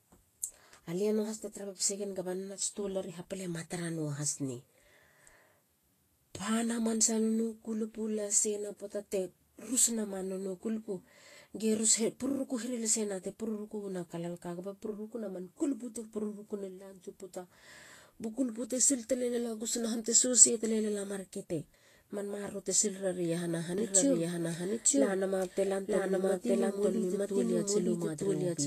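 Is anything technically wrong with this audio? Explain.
Yes, there are two problems. Throughout the speech there's clear Vorbis compression damage, most likely from encoding at a low bitrate; the amount of damage fits something around 33 kbps. The encoder spent too few bits on the treble, so fine high detail turns into grainy hiss, and nothing survives above 14.2 kHz.

From 23.78 s to the end there's a doubled audio track. A second, full-band copy of the speech sits about a second behind at roughly the same level, likely from a slower capture path or an edit that left two copies running. It comes in abruptly, with no room colour or decay, so the speech is heard twice over.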